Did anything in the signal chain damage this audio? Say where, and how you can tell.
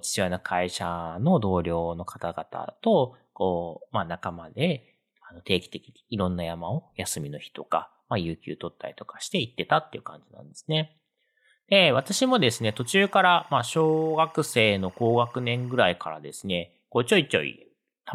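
Yes. Timecode bleed entered on the analogue wiring side, audible from 11.98 to 15.91 s as a steady chirping warble sitting behind the speech, well down in level. The warble alternates between two pitches, roughly 1 kHz and 2 kHz, which is the signature of linear timecode's biphase square wave. It repeats at a rate consistent with 24 frames per second, which points to LTC from a neighbouring track or cable coupling into this audio path.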